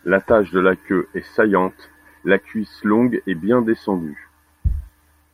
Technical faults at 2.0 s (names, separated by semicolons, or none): none